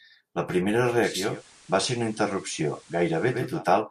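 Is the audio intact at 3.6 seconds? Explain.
No. Digital radio blending to analogue runs from 0.98 to 3.65 s: the receiver lost its digital stream and cross-faded over 450 ms to the FM broadcast, so at 3.6 s the speech is about 1 dB quieter and carries faint hiss.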